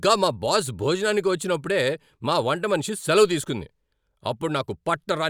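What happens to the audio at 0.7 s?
Nothing goes wrong at 0.7 s; the audio is intact at that moment.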